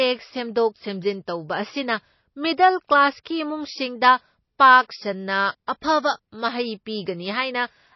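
Throughout, the speech sounds dull and watery, with nothing above 5.8 kHz; this plainly audible damage is likely MP3 compression, pointing to a bitrate near 24 kbps. At 3.24, 4.59 and 5.67 s, a brief hiss of 12 to 19 ms runs ahead of sharp attacks. This is pre-echo: quantisation noise spreads across the block into the quiet moment before each onset.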